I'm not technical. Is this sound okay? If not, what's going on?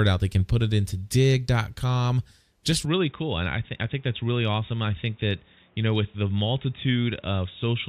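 No. Input switched to a poorer device at 2.86 s: the speech abruptly turns dull, quieter and noisier, likely from a lesser microphone that passes nothing above 3.8 kHz.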